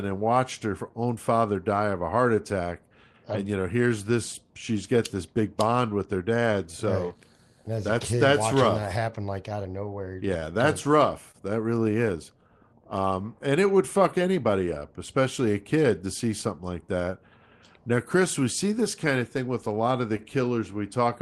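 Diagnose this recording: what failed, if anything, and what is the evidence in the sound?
Clock drift between sender and receiver sits at the network/buffer stage. The far end's clock runs about 2% slow, so the jitter buffer keeps draining and the receiver has to stretch the audio. The result is a faint, uneven unsteadiness in pacing across the whole speech clip.

Repeated timing corrections from 0.24 to 19.93 s, ending just before "of the", are the visible side of that drift. Playback runs at 99% speed, with the receiver inserting small repeated slivers that add up to roughly 300 ms. They show up as slight hiccups and a loping tempo rather than any clean dropout.

Scattered short gaps between 5.90 and 7.97 s come from packets lost or late on the network. There are about three of them, each around 10 ms at most, patched by carrying the previous sound forward. Nothing is actually missing, but you get a few tiny ticks or smears, covering around 1% of that stretch.

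A short stall from a late packet happens twice: 11.31 to 11.36 s, held 27 ms, and 20.17 to 20.21 s, right after "of the", held 20 ms. Each time the jitter buffer ran dry, so the last sound was stretched until the packet turned up, then playback resumed where it left off. Both stalls are heard through the Opus call path, whose 12 kHz top end suggests a modest bitrate around 24 kbps.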